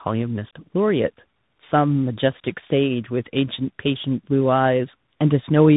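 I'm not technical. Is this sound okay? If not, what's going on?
No. Throughout the clip the speech suffers from tandem speech coding. The call passed through two different phone-style voice compressors in a row, and the second one squeezed audio the first had already roughened. Like a plain muffled phone line, it cuts the highs; here nothing above about 3.8 kHz survives, and you also hear a grainy roughness and a watery warble that one compressor alone wouldn't leave this strongly.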